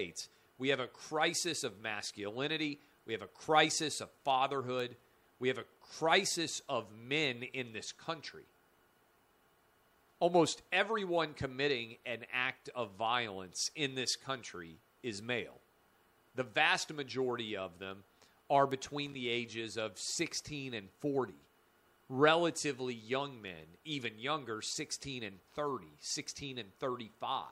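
At 4.80 s and again at 18.71 s, a bit error spike produces a single sharp, broadband tick. A flipped bit throws two samples to about -30 dBFS before they snap back. From 19.06 to 19.15 s, loose connector crackle adds a brief irregular scratchy burst as an intermittent contact chops the signal on and off.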